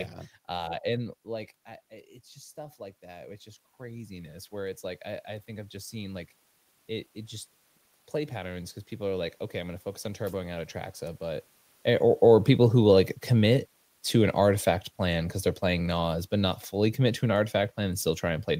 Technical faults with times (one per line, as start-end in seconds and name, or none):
2.33-6.33 automatic gain rising